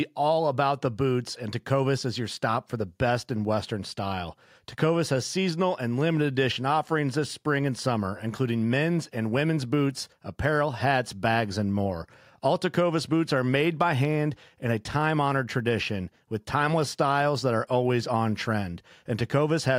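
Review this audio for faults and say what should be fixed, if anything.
Nothing in the signal needs fixing, as levels, timing and frequency content hold steady throughout with no audible technical problem anywhere in the recording.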